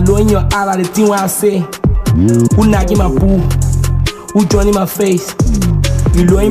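From start to finish, Wi-Fi interference runs under the audio: a steady ticking a little under ten times a second, set by a beacon period of 102.4 ms and sitting roughly 30 dB below the signal. A nearby Wi-Fi radio's regular beacon bursts are being picked up and rectified by the audio circuit. On a spectrogram this appears as thin vertical broadband lines evenly spaced about 0.1 s apart; the waveform shows matching small, regularly spaced spikes.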